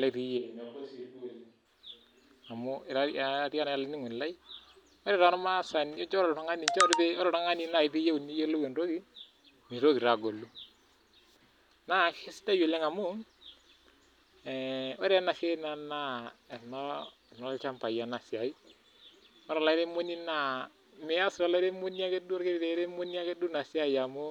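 Speech, with a switch to a distant microphone from 0.39 to 1.64 s: the sound suddenly turns roomy and thin, about 5 dB quieter, over faint room noise. Unlike a plain level dip, added reverberation arrives and leaves instantly, likely because the close microphone dropped out.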